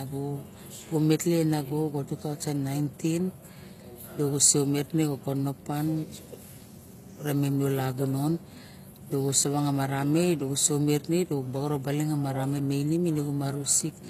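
Throughout the speech, s sounds come out gritty and lispy while the treble stays bright up to a hard ceiling near 14.9 kHz. This is likely HE-AAC compression at a low bitrate, about 24 kbps, rebuilding the top by copying lower bands upward, unlike plain AAC's dull, muffled loss.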